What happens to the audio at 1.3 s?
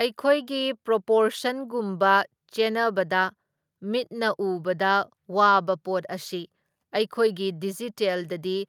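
At 1.3 s the speech continues cleanly, with no dropout, click, distortion or other fault.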